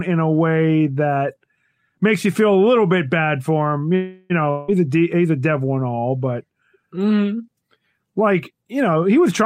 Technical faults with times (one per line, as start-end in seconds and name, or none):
3.95-4.32 call audio freeze
4.50-4.70 long network dropout
8.96-9.43 jitter buffer speed-up